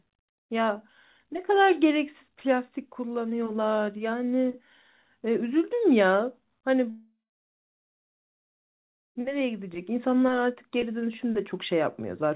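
A long network dropout runs from 6.9 s to 9.17 s in this speech clip, which comes through a call path with nothing above 4 kHz, consistent with a narrowband G.711 mu-law codec. At 6.9 s the sound smears into a brief fading buzz, then about 2 s of silence follows before the audio resumes at 9.17 s, with roughly 2.3 s of content gone. The likely cause is a run of lost packets, with the receiver's concealment stretching the last sound until it gave up and went quiet.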